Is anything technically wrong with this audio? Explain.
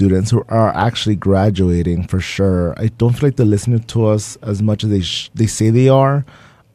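No, nothing technically wrong here.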